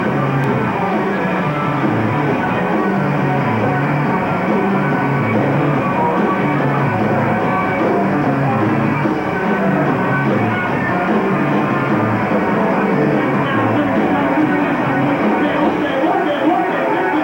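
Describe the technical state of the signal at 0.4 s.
Right around 0.44 s the audio jumps forward instead of flowing on. That's most likely a dropped buffer (overrun): the software didn't pull in its samples before the hardware wrote over them, so a short chunk, something like 15 ms, just vanishes and the sound on either side gets butted together. There's no gap of silence, but a skip in the sound.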